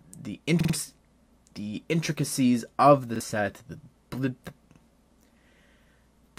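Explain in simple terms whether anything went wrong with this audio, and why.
A repeated buffer stutter occurs three times: at 0.60–0.74 s one 46 ms chunk, consistent with a 2048-sample buffer, plays three extra times, and at 3.16–3.20 s and 4.74–4.78 s a chunk repeats once. Fresh audio arrived late, so the player reused old sound.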